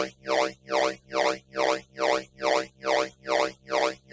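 Throughout the clip, a speech noise suppressor applied to sounds treats steady content as noise. Its gain rides up and down by around 20 dB, so the level pumps and flutters, with sharp onsets passing through and sustained portions thinning out. On a waveform the envelope looks jagged and uneven. On a spectrogram, which shows nothing above 8 kHz because of the call microphone processing, held energy appears as patchy, broken-up bands instead of smooth continuous traces.

From 0.1 s to the end, the suppressor also cuts parts of the sound it mistakes for noise. Over roughly two seconds in total these are pulled down harder than everything else, at worst by about 14 dB. Decays are chopped short and sustained parts sink, while transients come through largely intact. The waveform shows tails collapsing abruptly rather than fading, and the spectrogram shows those regions darkened and truncated, with clean vertical onset lines left standing.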